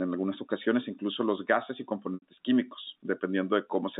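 Packet loss with pitch repetition at 2.14 to 2.22 s: about 80 ms of speech, consistent with four lost 20 ms packets, is bridged by repeating the last pitch period. This brief buzzy hold fades toward silence before speech cross-fades back, all within the telephone-band G.711 sound.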